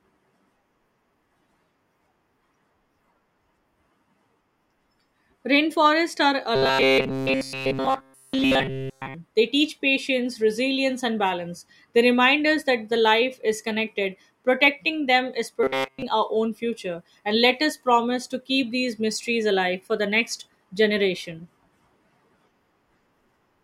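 Speech with two stretches of robotic sound from repeated short buffers, at 6.56 to 9.15 s and again at 15.63 to 16.02 s, between "them is" and "our own future". In both, the voice becomes a rigid metallic buzz fixed at 133 Hz, with essentially all of the audio replaced by repeats. The likely cause is audio arriving too slowly, so the last 7.5 ms block is looped while the real signal is dropped.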